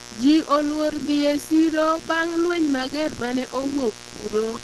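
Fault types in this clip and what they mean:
Mains buzz: A steady, raspy buzz sits under the speech for the whole clip, roughly 20 dB below it. It is built on 60 Hz, with switching spikes twice per cycle spreading harmonics up into the kilohertz range. That gritty, many-harmonic edge is what separates it from mains hum, which is a smooth, nearly pure low tone at 60 Hz and its first few multiples, with no rasp.
Opus compression: The speech sounds muffled and hoarse, with rough, grainy texture instead of the swirly, watery holes typical of MP3. Nothing is present above 12.1 kHz, a band limit whose content sits at the edge of super-wideband. The likely cause is Opus running in its hybrid speech mode at a low rate, which fits around 16 kbps, where harmonics turn noisy rather than dropping out.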